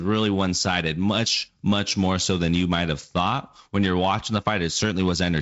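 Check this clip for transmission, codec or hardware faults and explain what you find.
Nothing stood out on listening to this speech, which comes through G.722 wideband telephone coding with its top end stopping at about 7.7 kHz.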